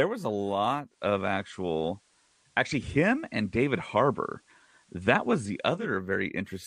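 After "was a", from 0.84 to 5.91 s, digital radio blending to analogue FM: 222 ms crossfades, faint hiss, and about 2 dB level shift.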